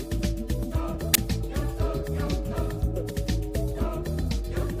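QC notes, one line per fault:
1.14 s and 3.09 s, damaged data in a compressed stream: each is a very brief glitch, about 16 to 18 ms long. Part of the compressed data at these points was corrupted, so the decoder misread those frames, lost sync and had to hunt for the next valid frame header. It then picked up at the next frame it could read, which produces the glitch.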